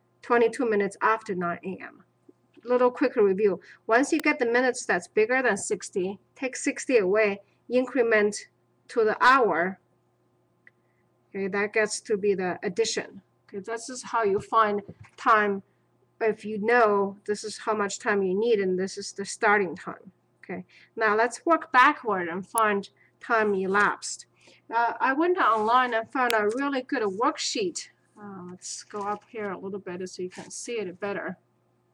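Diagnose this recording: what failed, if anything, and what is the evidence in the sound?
Three sharp, isolated snaps sit on top of the sound at 4.20 s, 22.58 s and 26.30 s, each only a few milliseconds long and peaking around -10 dBFS and -5 dBFS. These are electrical switching spikes picked up in the analogue wiring, likely from a nearby switch or motor arcing.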